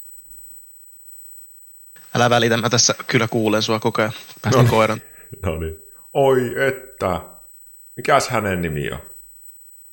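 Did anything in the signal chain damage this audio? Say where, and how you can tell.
Yes. USB whine runs through the whole speech clip: a steady, fixed-pitch tone at 8 kHz with its strongest component at the 16 kHz harmonic, sitting roughly 15 dB below the speech. The damage enters in the analogue wiring. The USB bus draws current in 125-microsecond microframes, and that 8 kHz pulsing leaks through the shared power or ground into the audio path. That is why the pitch never moves with the speech and the tone appears at exact multiples of 8 kHz.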